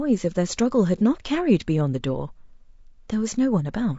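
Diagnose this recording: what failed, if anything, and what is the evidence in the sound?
The speech is rough and grainy throughout, with noise filling the gaps between harmonics and a thin, synthetic upper band. That points to the codec stage, likely low-delay AAC compression (AAC-ELD) at a low rate of around 32 kbps. Its short frames resolve pitch poorly, so a spectrogram shows blurred harmonic lines and patchy high-frequency energy.

From 0.98 to 1.02 s there is a brief smeared, noisy patch from AAC frame loss with concealment in the network or transport stage. About 30 ms of audio went missing, which fits one lost frame, and the decoder rebuilt it from the previous spectrum. A spectrogram shows a short smeared patch.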